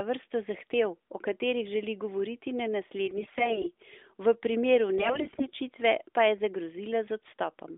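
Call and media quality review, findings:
AMR bit errors, 3.08–3.68 s and 4.98–5.47 s. Hoarse, scratchy, gargly speech at held pitch and level. Flipped weakly protected bits in the AMR-NB 12.2 kbps stream misplace excitation pulses and skew fine gain/spectrum values. Roughly 10%, then 15% bit errors; second burst harsher.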